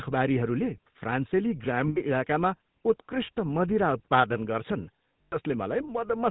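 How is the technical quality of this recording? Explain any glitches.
The recording is speech with audible damage from a low-rate phone codec throughout and two short dropouts where the codec covered for missing data.

GSM full-rate codec, whole clip: the speech was coded by modelling the vocal tract and exciting it with sparse, regularly spaced pulses, which fits the 13 kbps full-rate codec. Nothing above 4 kHz survives, so the audio sounds narrow, with a plainly audible buzzy, gravelly roughness on the voice.

Lost GSM frames, 1.88 to 1.98 s and 5.22 to 5.36 s: data went missing for about 80 ms and then about 100 ms, consistent with four and five lost frames. The decoder kept repeating the last good frame's settings, so each gap is heard as a brief rough, metallic ring.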